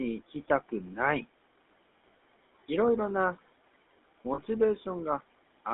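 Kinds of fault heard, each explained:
GSM full-rate codec: The whole clip passes through an old vocal-tract coder whose coarse pulse excitation gives the speech a plainly audible buzzy, gravelly roughness, with a line band of about 250 Hz to 3.6 kHz that fits a 13 kbps full-rate coder. Plain band-limiting would only dull the sound without this grain.
lost GSM frames: From 4.34 to 4.39 s, about 40 ms, which fits two lost frames, the decoder repeats the last good settings. The result is a brief rough, metallic ring held over the gap rather than the clean silence of a simple dropout.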